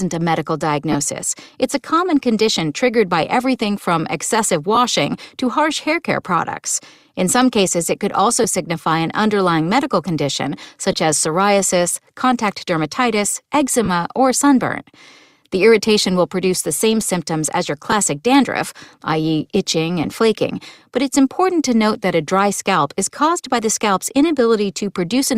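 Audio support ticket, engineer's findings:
Lost LE Audio frames: seven short dropouts, at 0.92–0.95 s after "a medical", 4.75–4.77 s, 8.43 s, 10.92 s between "an underlying medical condition" and "as psoriasis contact dermatitis", 13.84–13.89 s, 17.91 s, and 20.04 s before "flaking but it's important". Brief noisy smears where the decoder reuses the last spectrum with random signs, each lasting 7.5 to 37.5 ms, which points to multiples of a 7.5 ms frame. The source is likely the LC3 link, which shows light codec damage.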